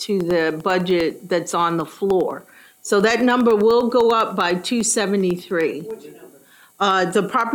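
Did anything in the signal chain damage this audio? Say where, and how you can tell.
Yes. Periodic USB or driver dropouts at the driver stage: every 0.1 s from 0.11 to 7.41 s, the stalled driver zeroes about half a millisecond, ticking. Waveform shows evenly spaced notches; the spectrogram shows thin vertical lines.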